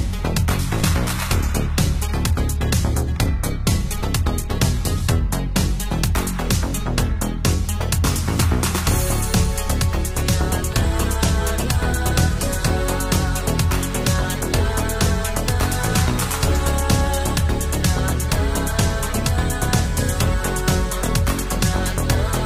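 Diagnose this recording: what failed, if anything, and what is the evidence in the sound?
Adaptive stream starting at a low bitrate, from 0 to 6.0 s, at the network and codec stage. For the first six seconds the treble is thin and partly synthetic, with stronger codec artefacts, which fits a low-rate parametric coder around 20 kbit/s. At 6.0 s quality jumps with no gap to a fuller band reaching about 14.9 kHz, which fits roughly 96 kbit/s. The player began on a cheap rendition to start fast, then stepped up once it had measured the connection.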